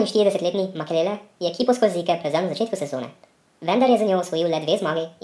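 From start to finish the speech runs fast and high, a wrong sample rate fault. It plays 1.5 times too fast with pitch raised about 7 semitones, which fits 16 kHz audio played at 24 kHz with no conversion, so voices sound squeaky and rushed.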